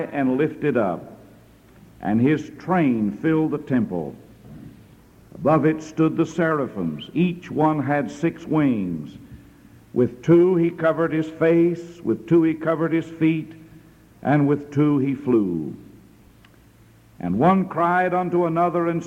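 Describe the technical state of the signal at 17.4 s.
At 17.4 s the signal is intact, with no audible fault at that moment.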